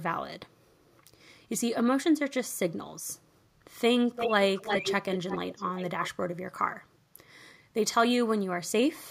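A speech clip with echo leak: a copy of the voice trailing by 346 ms at 4.15, 4.55, 5.11, 5.56 and 6.02 s, ranging from nearly as loud as the speech to faint. On a spectrogram it shows as ghost harmonic bands shifted right; on a waveform, as smeared trailing envelopes. It is likely a loudspeaker echo canceller letting some microphone pickup through.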